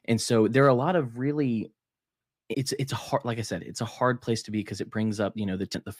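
Damaged data in a compressed stream strikes twice, leaving the decoder to misread the frames there and lose sync until it finds the next valid frame header. Each is heard as a very short blip, at 2.54 s just before "it's it's a hard" and again at 5.74 s.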